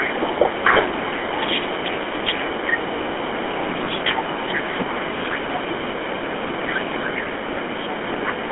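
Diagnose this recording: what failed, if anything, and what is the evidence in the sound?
The codec stage shows GSM full-rate coding across the whole clip. The speech has the buzzy, gravelly roughness of a coder that models the vocal tract and drives it with a sparse, regularly spaced pulse excitation. The damage is plainly audible. The passband is confined to the telephone line band of roughly 200 Hz to 3.4 kHz, which fits a 13 kbps full-rate channel. Everything the microphone path delivered above that limit is lost.

In the call processing, speech suppressed in double talk appears in three stretches: 0.0 to 3.19 s, 4.19 to 5.65 s and 7.3 to 8.16 s. In these the talker's level dips and thins, by around 10 dB in the first and last stretches and as much as 20 dB in the middle one. The likely cause is the echo canceller. It could not separate near-end speech from loudspeaker echo while both sides were active, so it attenuated everything.

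On the network, lost GSM frames occur at 0.74 to 0.77 s and 3.84 to 3.87 s. Each is a short gap, about 20 ms of missing signal, consistent with a single dropped frame. The decoder conceals each gap by repeating the parameters of the last good frame. This produces a brief rough, metallic ring where the speech should continue. Both gaps are short enough that the ring never fades fully to silence.

Also in the call processing, the other side's voice leaking through is audible as a faint second voice at 4.17 to 4.22 s, 5.33 to 5.75 s, 7.16 to 7.57 s and from 8.26 s to the end. It sits about 20 to 25 dB below the main speech. The likely cause is incomplete echo cancellation, which let the far end's loudspeaker playback back into the microphone. These stretches overlap the double-talk suppression around 4.2 s and 7.3 s.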